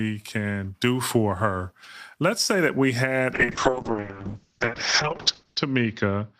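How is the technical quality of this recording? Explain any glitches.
Quality collapses late in the clip. A call bitrate drop starts at 3.35 s, after "say that we", and lasts to the end. The encoder gets far fewer bits, which fits a fall to about 6 kbps. Everything above 8 kHz vanishes. Speech turns muffled and rough, worst for 2.2 s.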